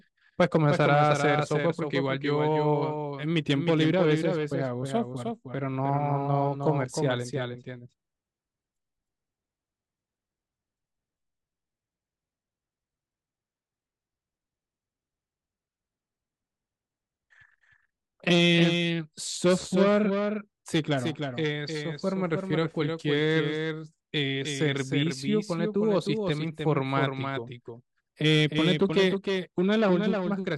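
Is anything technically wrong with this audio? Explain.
Yes. Throughout, a doubled audio track trails the speech by about 300 ms and about 5 dB quieter, likely a second capture path. Waveforms and spectrograms show every syllable repeated, full-band, without decay.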